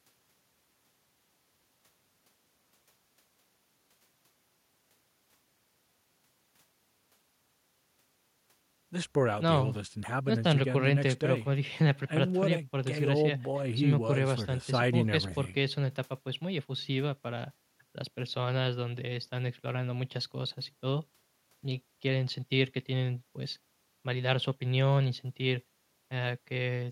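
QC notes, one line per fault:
No faults heard in this speech recording. Nothing here calls for a QC flag.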